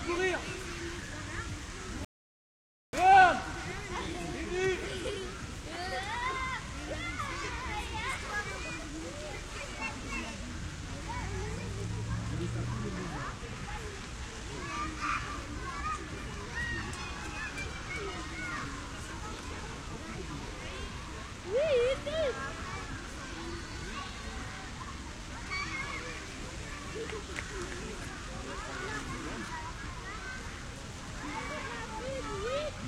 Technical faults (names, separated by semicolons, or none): rebuffering stall